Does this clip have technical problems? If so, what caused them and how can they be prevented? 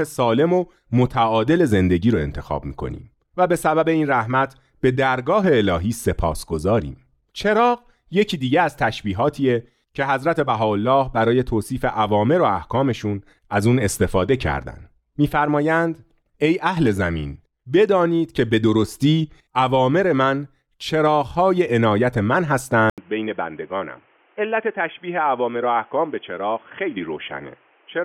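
Yes. At 22.9 s the speech drops out for 80 ms, then returns dull and boxy, with nothing above 3.4 kHz, roughly 5 dB quieter and over new background noise around 35 dB down. This likely means the input switched to a poorer device, such as a headset's call profile. Locking the recording input to one fixed microphone prevents the switch.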